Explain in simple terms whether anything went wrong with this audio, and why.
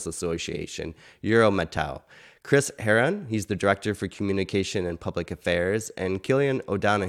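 Nothing went wrong: there are no audible technical faults anywhere in this speech recording.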